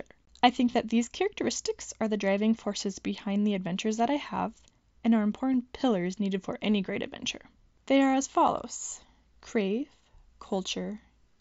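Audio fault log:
0.72–0.74 s, 3.35 s, 5.53 s, concealed Bluetooth headset packet loss: brief buzzy hold, then a slight warble as real sound resumes, in the longest run at 0.72 s; the single losses at 3.35 s and 5.53 s are nearly hidden. Missing packets between headset and phone were patched by repeating a best-matching recent stretch, through the mSBC wideband link.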